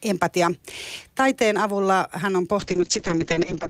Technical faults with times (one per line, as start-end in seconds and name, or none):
2.60-3.70 call bitrate drop